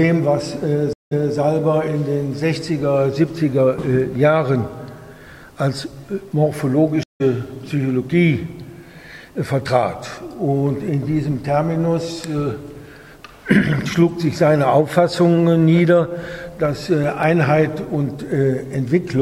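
At 0.93 to 1.34 s a stream reconnect occurs. The connection dropped, and the player restarted its decoder mid-stream after the server resent a burst of earlier data. The result is 181 ms of silence, and the audio then resumes 232 ms earlier than where it cut off, so a short stretch plays twice. A second stream reconnect follows at 7.03 to 7.22 s. This time the gap is 167 ms, and playback picks up at a later point, roughly 150 ms on, so a small piece of the audio is skipped.

From 16.65 to 17.23 s come CD scratch ticks. A blemish on the disc destroyed more data than error correction could rebuild, once per revolution, and the player patched over the damaged samples. The result is four brief ticks, the longest lasting only a couple of milliseconds. They arrive at a regular rate, matching the disc's rotation.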